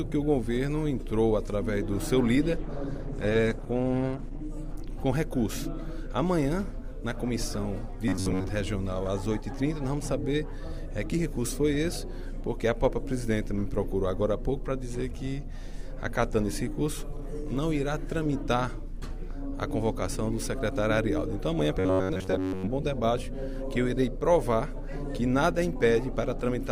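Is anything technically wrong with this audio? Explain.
Yes, there are two kinds of problem here.

From 2.49 to 4.49 s the audio drops to an adaptive stream at a lower bitrate. Quality falls off suddenly with no gap: the top end is cut, with nothing above about 12.1 kHz, and the detail gets smeary. That fits an Opus stream stepping down from around 64 to around 16 kbit/s while the connection was struggling, then recovering.

There's robotic sound at 8.08–8.50 s and again at 21.75–22.68 s. The audio turns into a stiff, metallic buzz pitched at 93.8 Hz that still loosely tracks the underlying sound. The likely cause is repeated short buffers: fresh audio arrived too rarely, so playback kept looping the last chunk of roughly 10.7 ms, which sets that pitch. Most of each stretch is repeated material, and the real audio in between was skipped.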